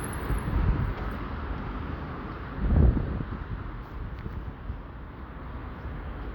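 No technical faults can be heard anywhere in this recording of sounds. Nothing in the audio breaks up, drops out or shifts at any point.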